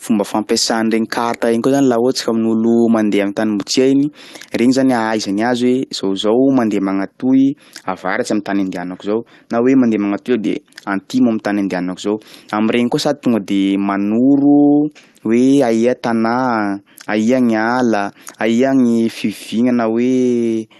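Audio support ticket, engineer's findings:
No faults found in the speech. The call path sounds as expected, with normal codec coloration and the top end rolled off near 12 kHz, which fits Opus at around 32 kbps.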